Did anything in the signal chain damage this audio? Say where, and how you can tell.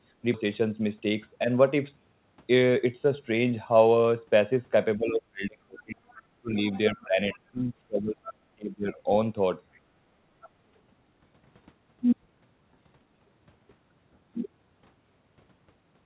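Yes. At 0.34 s the speech jumps forward with no gap or fill, as if roughly 0.7 s were cut out and the two sides butted together. This is a skip ahead in the jitter buffer or network: a late stretch of audio was discarded while newer audio was already waiting.

From 0.44 to 1.94 s the speech runs hurried, about 9% fast, yet the pitch stays put. That is jitter buffer speed-up: to shed excess delay, the receiver trimmed short pitch-period slices, around 150 ms in total, compressing time without shifting pitch.

The talker's level sinks sharply at 4.97–6.00 s, 6.41–6.56 s and 6.91–9.09 s, by up to about 40, 25 and 30 dB respectively. This is likely speech suppressed in double talk, with call-processing echo cancellation ducking the near-end voice while both sides spoke.

Faint scraps of a second voice surface at 6.08–6.22 s, 7.00–7.04 s, 9.74–9.80 s and 10.42–10.49 s, roughly 25 to 35 dB below the main speech. 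This is likely the other side's voice leaking through, loudspeaker echo the canceller in the call-processing stage failed to remove fully.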